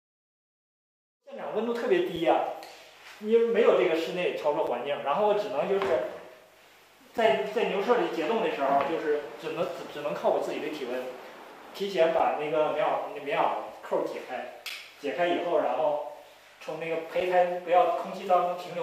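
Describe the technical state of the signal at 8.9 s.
At 8.9 s the signal is intact, with no audible fault at that point.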